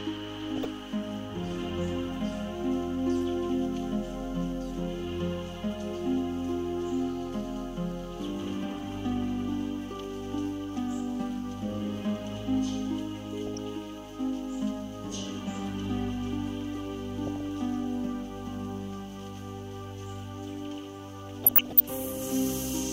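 DAB burbling affects the audio at 0.56–0.66, 13.47–13.59, 17.27–17.49 and 21.42–21.80 s, where bit errors of a fraction of a percent slipped past error correction. A spectrogram shows isolated sub-band blocks flaring for a frame, heard as short blips of noise.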